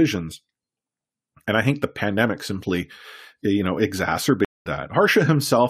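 At 4.45 s the speech cuts to silence for about 0.2 s, until 4.66 s, which is a stream reconnect. The connection dropped, the player went quiet, reconnected, and started a fresh decoder partway through the live stream. When sound returns it has jumped ahead by roughly a fifth of a second, so that stretch of speech is simply missing. A plain dropout or concealed packet loss would pick up where it stopped; here the timeline skips forward.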